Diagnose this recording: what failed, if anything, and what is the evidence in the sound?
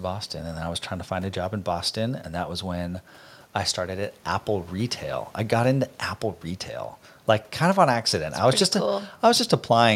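Nothing failed: there is no fault evidence anywhere in this speech recording.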